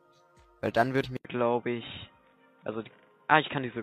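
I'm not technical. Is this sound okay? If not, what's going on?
No. At 1.00 to 1.06 s and again at 2.58 to 2.62 s, the sound jumps ahead. These are compressed frames skipped: about a tenth of a second of audio was lost each time.

From 1.17 s, after a short gap, the sound turns dull and muffled with nothing above 3.8 kHz. The likely cause is the input switching to a poorer device.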